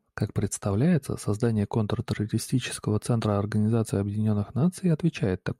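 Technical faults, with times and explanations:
No technical faults are audible.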